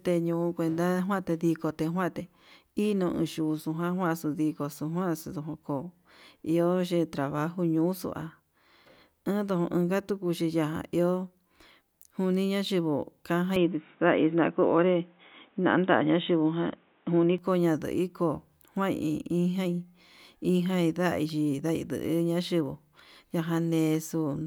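At 13.56 s the speech abruptly narrows, with nothing above 3.8 kHz, and the level shifts by about 5 dB, with no gap at the transition. A faint, different background hiss appears, sitting well below the voice. This boxy, band-limited sound lasts until 17.38 s, when full bandwidth returns. The likely cause is an input switched to a poorer device, such as a headset's call profile, with its own narrower response, gain and noise floor.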